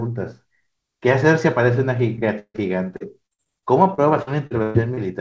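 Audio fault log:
2.16–2.19 s and 2.56–2.59 s, short concealed packet loss: two little holes of about 20 ms each where packets arrived too late. The receiver stretched the preceding sound across each one and then blended back, so you get a quick smear or wobble.
2.39–2.63 s, burst of packet loss: roughly 160 ms went missing in one go. The decoder kept the last sound going and faded it over about 150 ms, then dropped to about 50 ms of near silence before real audio picked up again further along.
2.96–4.99 s, repeated packet loss (robotic sound): eleven separate gaps hit this stretch, the longest 118 ms, about 460 ms lost in total. That's roughly a fifth of the span rebuilt by concealment, so the speech turns choppy, with bits dropped out.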